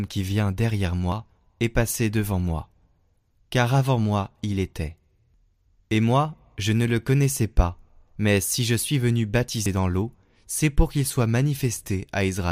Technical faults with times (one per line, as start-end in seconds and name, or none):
1.12 dropped buffer (overrun)
9.66 dropped buffer (overrun)